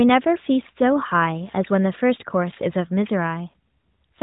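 No technical faults can be heard in this recording.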